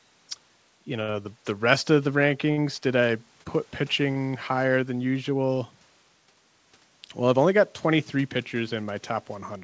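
Short stalls from late packets occur at 1.02 to 1.24 s, just before "the rest of the", with a second one nested inside it at 1.10 to 1.16 s. Two more follow at 2.51 to 2.59 s, between "the rest of the" and "did I put", and at 3.43 to 3.48 s, after "did I". Each time a packet arrived late, the jitter buffer ran dry and the receiver stretched the last sound by 65, 38, 60 and 24 ms. Nothing is lost, but the sound briefly drags with a faint buzz or dip. The audio stops at 8 kHz, which fits a 64 kbps G.722 call path. The room noise sits about 38 dB below the speech.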